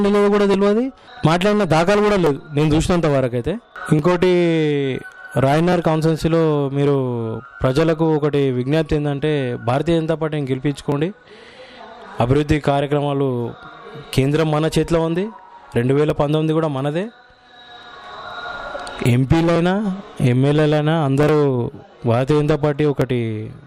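From 0.54 s to 23.02 s a click or pop recurs at a steady 1.73 s interval, roughly fifteen times in all, each a brief jump in the signal. That clockwork spacing points to clock drift buffer slips, likely from two devices running on separate clocks that disagree by something like 500 parts per million. The buffer between them creeps until a block of around 50 samples is dropped or repeated, and the cycle starts over.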